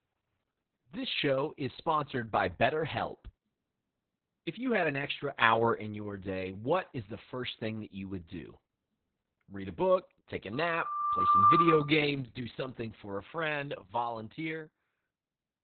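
Throughout, the speech carries heavy Opus voice compression. The SILK coder has narrowed the band to nothing above 4.4 kHz and codes the excitation coarsely, which fits a bitrate near 6 kbps, leaving it muffled, hoarse and slightly robotic. At 5.42 s a sudden gain jump raises the level by about 5 dB until 5.74 s. At 13.78 s another drops it by about 7 dB through to the end. Both are likely digital gain steps applied without a ramp.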